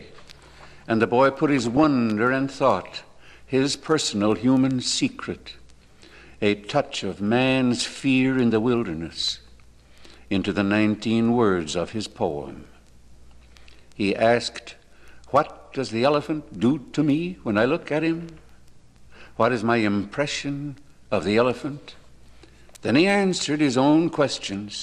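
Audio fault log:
1.67–1.84 s, 9.10–9.13 s, 24.12–24.31 s, DAB burbling: weak reception lets a few bit errors slip past error correction into the MP2 data, so wrong samples put short blips of noise in single sub-bands, giving burbling over the sound. A spectrogram shows short rectangular bright patches in isolated frequency bands, and the waveform shows irregular bursts.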